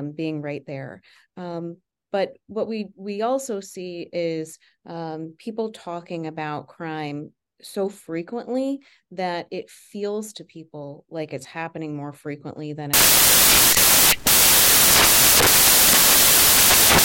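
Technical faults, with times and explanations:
12.94 to 17.04 s, samples built from the wrong bytes: from just after "happening more frequently than" to the end, the decoder starts assembling each sample from mismatched bytes, either shifted by one, swapped in order, or read at the wrong alignment. The rapidly fluctuating low-order bits end up as the most significant part of every value, so the speech collapses into loud, dense noise, close to white on the louder sounds.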